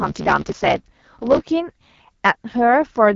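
It's a short speech clip, and the whole thing has gone through the AMR wideband (HD Voice) codec at 8.85 kbit/s, one of its two lowest rates. That's why the voice sounds rough and raspy all the way through. The codec models speech with a pulse-driven vocal tract filter, and at this rate there aren't enough bits to get the excitation right, so the damage is plainly audible. The top end also stops dead, with nothing above 7.5 kHz. On top of that, from the very start to about 1.41 s there's a block size mismatch (truncated). One stage is writing bigger blocks than the next one reads, which fits 512-sample blocks having their tails chopped off. Each chop leaves a seam, so you get a steady 75 Hz buzz at the block rate. Because part of every block is thrown away, that stretch runs about 1.6 times fast while keeping its timbre.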